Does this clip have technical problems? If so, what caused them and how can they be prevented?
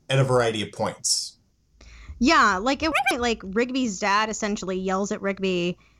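Yes. Right after "like at", from 2.92 to 3.11 s, the speech jumps an octave up and rushes at double speed. This is audio read two samples at a time: each pair of samples is taken as one frame, so the audio plays twice as fast and an octave higher. Prevent it by making the reader's channel count and sample width match the stream's actual format.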